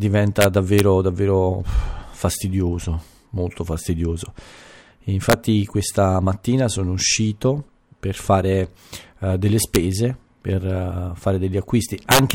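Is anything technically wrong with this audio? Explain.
Yes, the speech has integer overflow at 0.41–0.80 s, 5.30–5.33 s, 9.75 s and 12.11–12.31 s, where peaks exceed full scale by about 0 to 7 dB. Instead of being limited, those samples wrap to the opposite sign and flip across the whole range, giving violent cracks far harsher than the flattened buzz of clipping.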